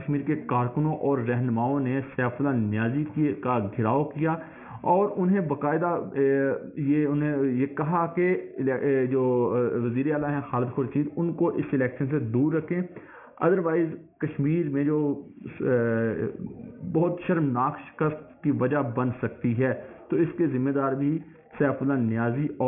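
From start to finish the sound has a gritty, metallic edge. The high content is gone, and in its place are harsh tones that track nothing in the material and are packed hard against a ceiling at 3 kHz. This is aliasing. The fold point suggests the audio was resampled to about 6 kHz with no low-pass filter first. Everything above 3 kHz reflected back down to false pitches, sitting roughly 30 dB under the sound.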